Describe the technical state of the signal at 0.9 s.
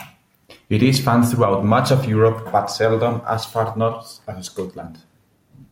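Around 0.9 s the speech signal is intact, with no audible fault at that point.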